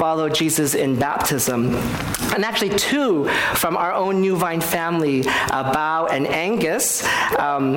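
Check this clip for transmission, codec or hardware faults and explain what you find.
No transmission, codec or hardware faults are audible here.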